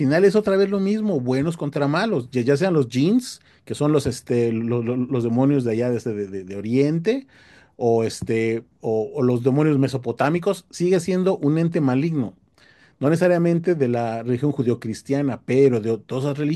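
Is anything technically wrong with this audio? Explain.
Yes. The speech hits hard clipping from 10.21 to 10.28 s, where the level runs about 3 dB past what a stage in the chain could pass, so the waveform's peaks are sliced flat for those few dozen milliseconds. The squared-off tops generate high harmonics, heard as a brief crackly rasp on the peaks. Unlike gentle saturation, which rounds peaks and adds warmth, this edge is abrupt and gritty, and it stops as soon as the level falls back.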